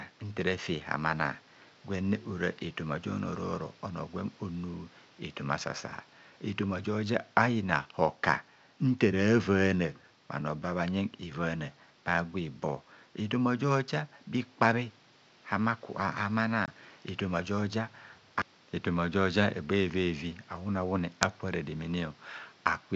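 At 16.66 to 16.69 s, just before "efoma joja", there is packet loss on an ADPCM call: a couple of packets, 20 ms of audio, are dropped and filled with silence. On the waveform this is a sharp-edged flat gap, and on the spectrogram a clean vertical blank across all bands, with even the faint room noise gone. Because the decoder's predictor and step size lose track of the sender's, the sound resumes slightly distorted before settling.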